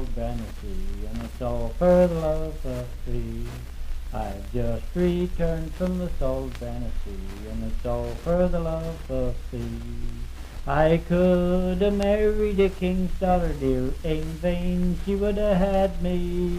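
The audio has one technical fault: a single sharp click at 14.29 s. It is the kind of mark left by dropped samples. A tiny stretch, a fraction of a millisecond, is likely missing from the stream. The waveform then jumps straight from one value to a later one. That step is far too short to remove any sound. It is heard only as a brief tick. On a spectrogram it shows as a thin vertical line.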